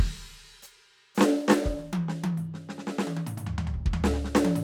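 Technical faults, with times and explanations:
No technical faults were found anywhere in the music.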